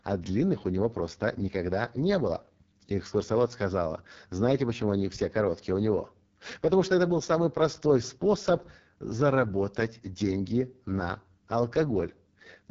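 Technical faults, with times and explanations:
Throughout, AMR wideband (HD Voice) codec: rough, raspy speech with nothing above 7.4 kHz, fitting its lowest 6.6 kbit/s mode, which starves the pulse-driven model.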